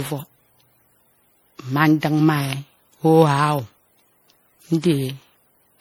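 Throughout the speech, the audio has likely suffered generation loss from MP3 encoding at 64 kbit/s repeated around ten times. Each pass re-quantises on a shifted frame grid, so it sounds swirly, hollow and smeared, with blurred attacks, despite content reaching about 20.8 kHz.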